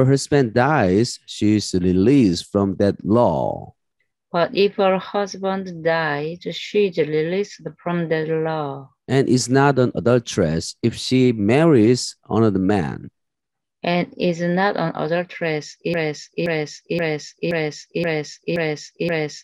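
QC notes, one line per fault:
15.94–19.44 s: broken-record loop. From 15.94 s to the end of the clip, a fragment about 0.52 s long plays back to back seven times, identical each pass, so the audio stops moving forward and stutters in place. The cause is likely a stalled player, encoder or stream that kept resending the last piece it held, and whatever should have played in those final seconds is gone. On a waveform the same shape tiles at exact 525 ms intervals. A spectrogram shows an identical block repeating.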